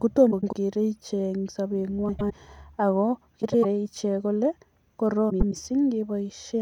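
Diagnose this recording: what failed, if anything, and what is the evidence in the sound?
Frames out of order at 0.31–0.54, 2.08–2.32, 3.42–3.65 and 5.30–5.53 s, heard as brief garbled flutters. In the network stage, two neighbouring 104.5 ms runs, which fits four frames each, arrived swapped and were decoded that way, so no time is lost.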